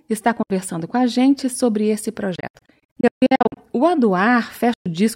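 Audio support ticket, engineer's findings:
Silent gaps at 0.43–0.50 s (70 ms), 2.36–3.57 s (about 630 ms lost in scattered holes, longest 140 ms) and 4.74–4.86 s (116 ms). Likely Bluetooth dropout: late packets discarded, output muted, speech resumes further along as if never paused.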